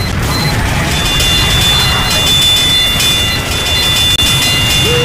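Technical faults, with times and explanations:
4.16–4.19 s, Bluetooth dropout: a 23 ms silence, a flat waveform and blank vertical band, likely one lost packet; the sound resumes as if it had played on.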